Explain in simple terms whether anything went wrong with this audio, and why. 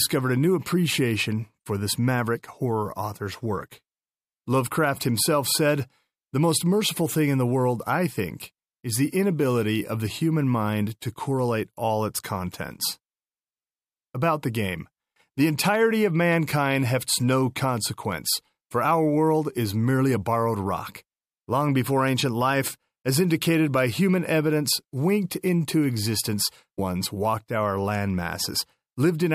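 Stream segment skipped, at 26.77 s, just after "evidence winked into existence": the speech suddenly jumps ahead with a small blip, likely because one piece of the stream failed to load and playback continued with the next.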